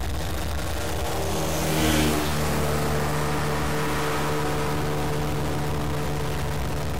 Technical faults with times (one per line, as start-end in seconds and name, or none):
0.00-6.99 stuck bit